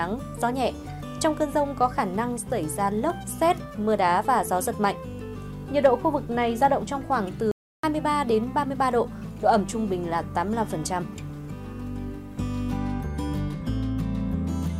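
At 7.51 s the player most likely ran short of data, or its playback thread was held up, so nothing reached the output until it caught up at 7.84 s. The result is a playback stall: the sound cuts off abruptly in mid-flow and leaves a gap of dead silence about 320 ms long. That is long enough to register clearly as a hole rather than a click, before the audio picks up again.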